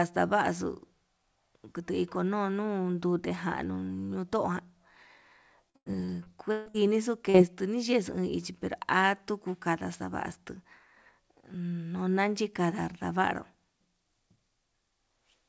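From 5.70 to 6.76 s the speech breaks into repeated packet loss, the robotic kind. Packets kept going missing, about half a dozen holes in that second, and each one was patched by stretching the sound that came just before it. Roughly a third of the stretch is filled-in audio, about 360 ms in total, and the longest hole runs 141 ms. The repeated guessing makes it choppy, with bits of the speech gone. All of this sits on top of a call path whose band stops at 8 kHz, which fits G.722.

At 7.30 s there's a short concealed packet loss. Around 40 ms never reached the decoder, so the receiver carried the last sound forward for those 39 ms and then blended back into the real signal. It's quick, more a small smear or wobble than a dropout, and a short consonant right there could disappear.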